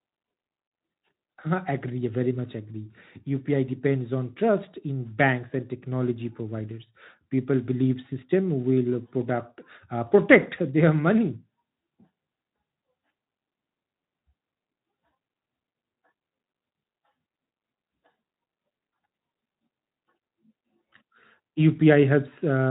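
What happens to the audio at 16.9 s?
Nothing goes wrong at 16.9 s; the speech carries on intact through that moment, still band-limited below about 3.9 kHz by the Speex coding it passes through.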